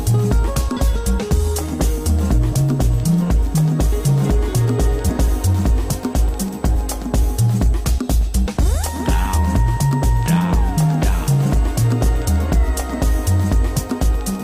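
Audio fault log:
throughout: USB whine. USB frame traffic at 125-microsecond microframes leaks through power or ground, leaving a fixed 8 kHz tone about 35 dB below the signal.
5.09–5.11 s: skip ahead. A stretch of audio was dropped, roughly 0.7 s of it, while later audio was already waiting, so playback jumps forward with no gap filled and the two sides are joined directly.
5.28–5.70 s, 6.75–8.55 s, 9.27–9.91 s: jitter buffer speed-up. The buffer held excess audio, so the receiver cut pitch-period pieces, roughly 40 to 50 ms in each stretch. The sound runs faster at unchanged pitch, at 107%, 102% and 106%. The first and third stretches are fast enough to sound hurried.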